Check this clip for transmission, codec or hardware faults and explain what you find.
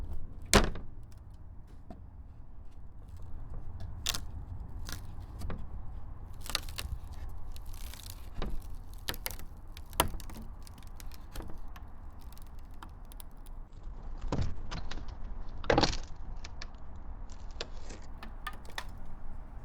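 There's one fault here, a call bitrate drop from 13.69 to 18.43 s. The link's bandwidth estimate fell, so the encoder coded more coarsely. The drop in detail points to something like 64 down to 8 kbps. Top end narrows from 20 kHz to 8 kHz, sounding muffled and rough, worst for about 1.18 s.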